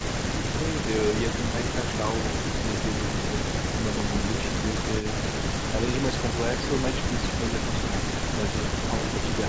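A sudden electrical step or pulse, likely from a plug, switch, static discharge or driver glitch, entered the signal from 4.00 to 4.02 s. The result is a single loud pop, roughly 20 dB above the speech, which carries on underneath it.

From 5.00 to 5.06 s the far end's echo canceller likely failed to remove its loudspeaker's output from its microphone, so an echo leak was sent back. A brief delayed copy of the speech, lagging about 98 ms and sitting roughly 20 dB below it, is heard over the band-limited call audio, which has nothing above 8 kHz.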